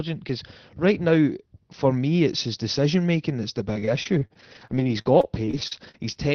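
From 3.73 s to 6.17 s, right after "decision making that's the", repeated packet loss (robotic sound) sets in. Many short dropouts, the longest about 38 ms, are patched by stretching the previous sound, so the audio turns choppy, with pieces missing.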